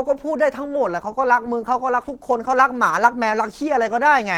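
At 0.85 s the speech drops abruptly in quality and stays degraded to the end of the clip, with no gap or dropout at the transition. This is an adaptive stream at a lower bitrate: the player switched to a cheaper encoding, most likely after throughput fell. Coding artefacts become audible, which fits Opus stepping down from about 64 kbit/s to 16 kbit/s.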